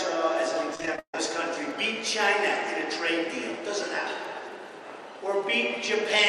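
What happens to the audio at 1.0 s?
At 1.0 s the audio is in the middle of a run of repeated packet loss (robotic sound), from 0.75 s to 1.14 s. Seven gaps fall in that span, each patched by extending the last received sound. About 56% of the stretch is concealed, and the longest gap is 146 ms. The result is choppy, robotic audio with pieces missing. Unlike a single dropout or one concealed gap, the holes recur in quick succession, so the artefact persists across the whole 0.39 s span.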